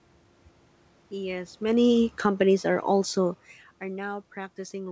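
Automatic gain falling runs from 1.62 to 3.47 s. The gain control judged the input too loud, or its background noise too strong, and eased its gain down by about 5 dB over that stretch, so the voice starts loud and then sinks, with the room noise behind it dropping too.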